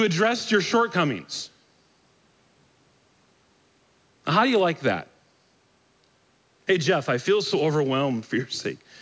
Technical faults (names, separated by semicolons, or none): none